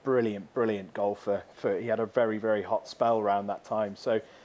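The far end's echo canceller likely let part of its loudspeaker pickup return: an echo leak. A faint copy of the speech trails 201 ms behind at 0.46–0.54 s and 3.98–4.03 s, very quiet, and a clearer scrap at about 25 dB down at 2.82–2.98 s.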